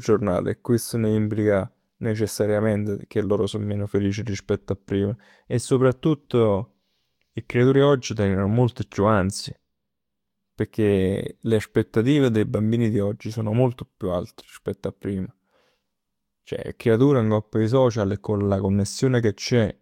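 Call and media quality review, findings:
No faults observed in the speech audio; nothing to attribute to capture, transport or playback components.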